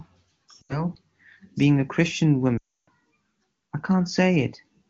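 At 0.62–0.83 s and 2.57–2.88 s, lost AMR speech frames make the decoder smear the last sound and fade it, unlike an abrupt cut to silence.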